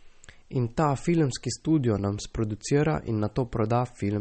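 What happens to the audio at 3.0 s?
At 3.0 s the speech carries the same damage heard across the whole clip, likely from MP3 compression. Nothing sounds above about 8.4 kHz, so the treble is cut flat. Weak frequency lines drop in and out between frames, which fits a low bitrate near 32 kbps. The result is plainly watery and swirly, with smeared onsets.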